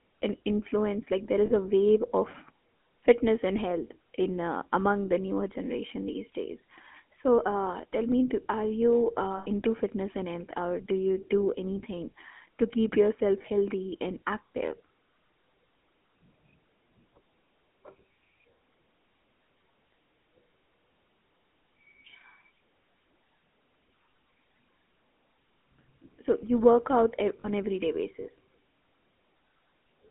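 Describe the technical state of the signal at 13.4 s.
At 13.42 to 13.45 s, between "anything to keep yourself" and "and active", lost GSM frames: a corrupted block was replaced by repeating the last good frame, leaving a brief rough, metallic ring. The gap, about 20 ms, fits a single lost frame. Underneath, the GSM full-rate codec, consistent with 13 kbps, drives a vocal-tract model with sparse pulses inside a 200 to 3400 Hz line band, giving plainly audible buzzy, gravelly roughness.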